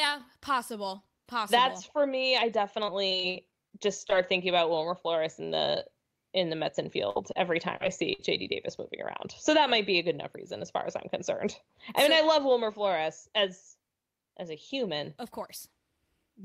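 From 2.86 to 4.12 s there's repeated packet loss, giving that choppy, robotic quality. Ten separate gaps, the longest about 49 ms, each patched by stretching the previous sound, so roughly 15% of that stretch is filler and about 180 ms of real speech is gone.

At 7.10 to 7.17 s comes a burst of packet loss. About 50 ms drops out in one go, the last sound is held and faded as a short buzz or hiss, and speech picks up again with that chunk missing.

Right after, there's short concealed packet loss at 7.33 s, 7.77 to 7.82 s and 7.87 s. Each is only 10 to 30 ms lost, filled by extrapolating the preceding sound and blending back, so you get brief smears or wobbles rather than obvious holes.

A second burst of packet loss hits at 8.14 to 8.20 s. It's another roughly 50 ms run concealed with a fading hold before the audio resumes further on.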